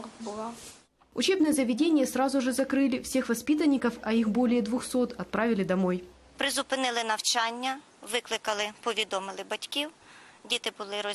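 No technical faults detected.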